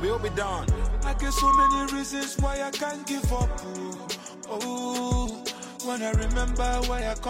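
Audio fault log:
1.20–2.09 s, loudspeaker feedback squeal: a 1.1 kHz tone swells over roughly a third of a second to about 10 dB above the sound as the mic–speaker loop runs away. On a spectrogram it shows as a bright horizontal line, and the waveform envelope balloons.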